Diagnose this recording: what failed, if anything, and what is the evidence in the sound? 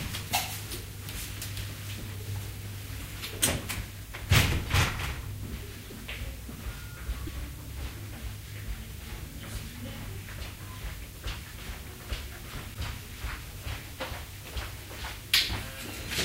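Codec stage. Short disturbances at 2.99–3.01, 5.89–5.92, 7.26–7.29 and 12.73–12.76 s, each about one 24 ms frame. Likely a broken MP3 bit reservoir, with frames decoding from the wrong bytes.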